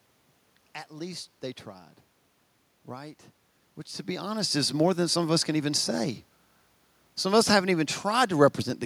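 Nothing here points to a system fault: the background noise is simply the room the microphone sits in, and the shift in level around four seconds sounds like the talker moving relative to the mic.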